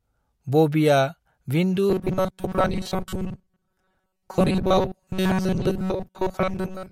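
From 1.90 s to the end, the speech collapses into a rigid, metallic buzz at 188 Hz that only loosely tracks the words. This robotic sound from repeated short buffers likely comes from the software looping about 5.3 ms of audio while most real audio is skipped.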